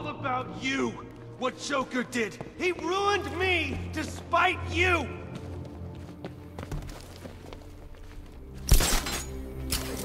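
Four short clicks occur, at 0.41 s, 3.69 s, 5.46 s and 6.42 s. Each is a single sharp tick with no gap or loss of sound around it, and each shows as a thin vertical line across the spectrum. The likely cause is dropped samples. A fraction of a millisecond of the stream goes missing, so the waveform jumps abruptly from one value to a later one, and that step discontinuity is what produces the broadband click.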